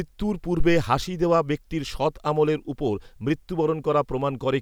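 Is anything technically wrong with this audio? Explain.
Yes. From 0.60 to 0.94 s the speech carries a phantom power thump: a supply switched on or off on a live input pushes a voltage step through the coupling capacitors. It peaks around -11 dBFS, decays within 77 ms, and shows as a large low-frequency waveform swing and a bright band low on the spectrogram.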